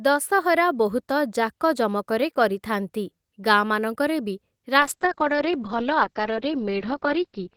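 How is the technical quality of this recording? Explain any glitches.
The recording has one clear glitch, a call bitrate drop. From 4.79 s to the end, the speech turns muffled and rough. Everything above about 6 kHz disappears, and coarse, watery coding holds for the final 2.6 s without recovering. The encoder was starved of bits after the connection's bandwidth estimate fell, which fits a cut from roughly 32 to 8 kbps, forcing both cruder coding and a narrower audio band.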